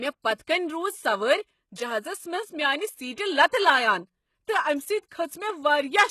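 Across the whole speech clip the treble sounds synthetic: sibilants come out gritty and lispy, with a metallic sheen, and nothing is present above about 12.3 kHz. The likely cause is HE-AAC compression at a very low bitrate, one that fits roughly 16 kbps. The codec encodes only the lower spectrum and fills the top by spectral band replication, copying lower bands upward, so the rebuilt harmonics fail to line up with the real ones.

At 0.42 s, and again at 3.47 s, a short hiss creeps in just ahead of a sharp onset, lasting about 52 ms and then 59 ms, and the attack itself lands softened and smeared. This is pre-echo. The transform block spreads its quantisation noise evenly in time, so noise sized for the loud attack also spills into the quiet stretch before it.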